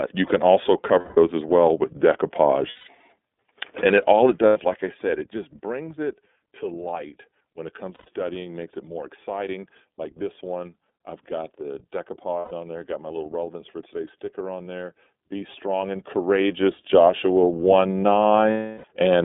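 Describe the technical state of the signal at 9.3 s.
At 9.3 s you're hearing the iLBC codec, which runs through the entire clip, so this moment is no exception. The speech sits in a telephone-style band of roughly 250 Hz to 3.6 kHz, with nothing on top. The damage is plainly audible: a rough, slightly synthetic edge, because each 30 ms block is coded on its own. That frame length points to the 13.33 kbps mode.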